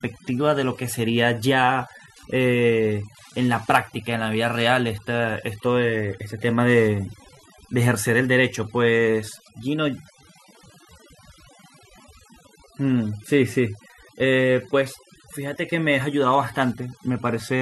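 A steady ticking runs under the speech for the whole clip, about ten clicks a second, with rougher rasping bursts between them, sitting roughly 35 dB below the speech. This is Wi-Fi interference: a nearby radio's beacon, repeating every 102.4 ms, plus its data traffic, is picked up and rectified by the audio circuit.

Throughout, the background is pushed to near silence, dotted with twinkling specks. That is overdone noise removal: a noise reducer set too aggressively cuts individual frequency bands whenever they approach its noise estimate, taking quiet speech detail along with the noise.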